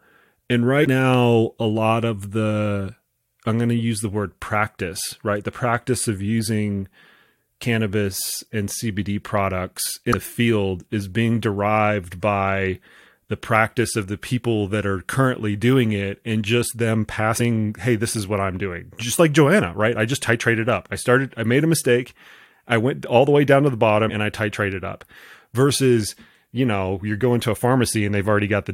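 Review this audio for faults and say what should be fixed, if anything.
Compressed frames skipped occur at 0.82–0.87 s before "now a lot of", at 10.10–10.14 s before "the field is being", and at 17.37–17.41 s between "it and just them" and "hey this is what". Whole frames went unplayed each time, so roughly a tenth of a second of audio vanishes, about 70 ms at the last. A spectrogram shows a vertical seam where the harmonics jump, and the waveform changes shape abruptly.

To fix and prevent it, re-encode or re-export from an intact source and verify the file's integrity before delivery.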